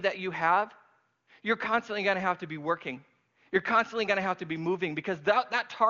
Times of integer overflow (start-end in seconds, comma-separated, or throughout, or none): none